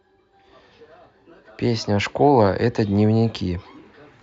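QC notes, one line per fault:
Nothing to flag on this one, no faults turned up anywhere in the speech.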